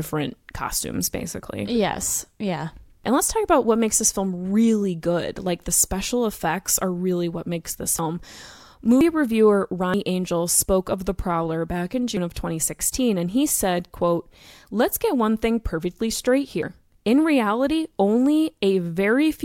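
At 7.99 s after "really what makes this", then 9.01, 9.94, 12.17 after "back in", and 16.63 s after "one thing perfectly straight", the speech jumps ahead with no gap, losing roughly a tenth of a second each time, likely dropped buffers from an overrun.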